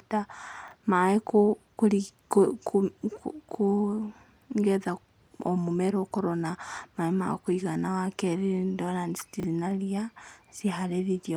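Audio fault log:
0.68–0.72 s and 9.40–9.44 s, chunks out of order: in each 40 ms stretch, one 10 ms chunk of the speech plays three chunks late, so the sound briefly jumbles, with three hard joins. The second event comes just before "na ria". A waveform shows abrupt discontinuities, and a spectrogram shows thin vertical broadband lines at each join.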